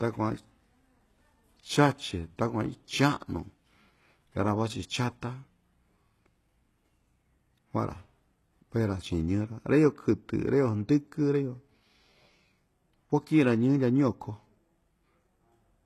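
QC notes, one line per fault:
Throughout, HE-AAC compression: the speech carries plainly audible coding damage, with nothing above 12.3 kHz and treble that sounds synthetic, so s sounds come out gritty and lispy. The likely cause is spectral band replication: only the lower spectrum is actually coded, and the top is rebuilt by copying lower bands upward under a coarse envelope. The harmonics therefore fail to line up across the crossover, and the damage fits a bitrate of around 16 kbps.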